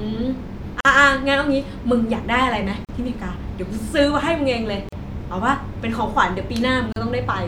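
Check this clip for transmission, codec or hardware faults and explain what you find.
The speech has one recurring fault, a gap at a join of encoded pieces. Short silences interrupt the speech at 0.81, 2.85, 4.89 and 6.93 s, lasting 44 ms for the first and 38 ms for the rest, before the sound resumes where it stopped. Two-second pieces were encoded separately and joined with each run's start delay and end padding left in.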